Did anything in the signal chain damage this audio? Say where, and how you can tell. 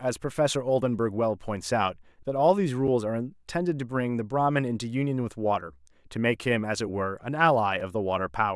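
Yes. A block of digital silence at 2.88 s and 7.80 s: 5.3 ms dropouts, a driver-buffer underrun that fits a 128-sample buffer.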